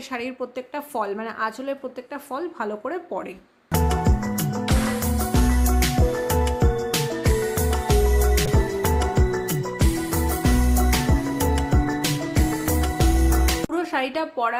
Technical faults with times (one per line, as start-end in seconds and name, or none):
8.47-14.60 call bitrate drop